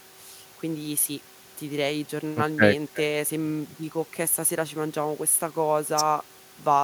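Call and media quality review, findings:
Nothing stood out on listening to the speech in this recording.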